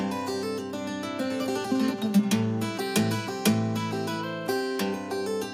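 Nothing in the signal points to a technical fault at any point.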